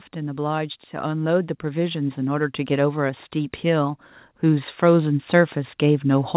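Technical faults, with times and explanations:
0.13–6.36 s automatic gain rising: the gain control judged the input too quiet and kept raising its gain, so speech and background swell together steadily.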